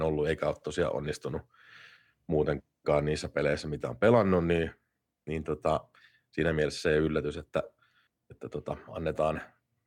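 Nothing in this speech recording stands out as a technical fault, so there's really nothing to flag here.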